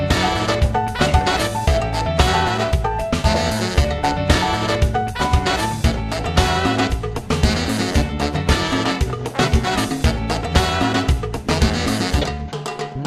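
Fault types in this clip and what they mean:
No faults are audible anywhere in the clip, with nothing to list.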